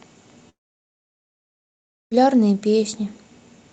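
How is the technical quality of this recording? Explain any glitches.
The recording has one significant glitch, a long network dropout between 0.49 and 2.14 s. At 0.49 s the speech breaks into a brief fading buzz, and then about 1.6 s of near-silence follows until the audio resumes at 2.14 s. The likely cause is that packets stopped arriving, so the receiver stretched the last sound before giving up and going quiet. Playback picks up later in the speech with that stretch missing, not delayed. Around the gap, the call path's codec limits the top end to about 8 kHz.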